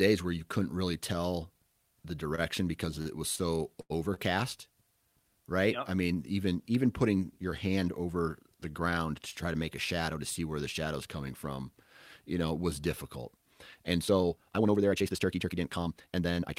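Right after "couldn't really tell the", short stalls from late packets hold the sound at 2.35, 3.02, 3.36, 3.81 and 4.14 s, stretched 22 to 92 ms with a slight buzz or dip. Nothing drops out, unlike a packet loss. From 13.98 s to the end, a time-stretched section runs about 1.79 times faster at unchanged pitch, sounding rushed, likely from software squeezing the audio to fit a length.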